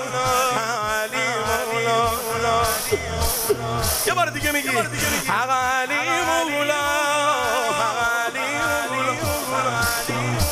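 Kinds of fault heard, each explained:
No technical faults can be heard anywhere in the clip. There is nothing to list under any kind.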